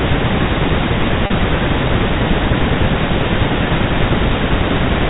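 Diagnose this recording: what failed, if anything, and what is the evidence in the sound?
The failure is at the network stage: packet loss with pitch repetition. At 1.26 to 1.30 s, about 40 ms of speech goes missing. The gap fits two lost 20 ms packets. The receiver bridges it by repeating the last pitch period. That gives a brief held, buzzy sound in place of the missing speech. Normal speech then resumes. Throughout, the G.711 telephone coding keeps the band below 4 kHz.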